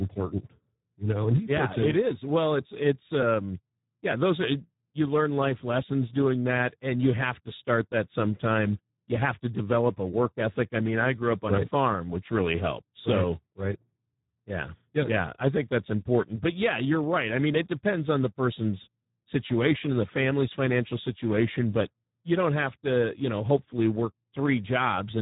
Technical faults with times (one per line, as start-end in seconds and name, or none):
0.00-25.21 Speex codec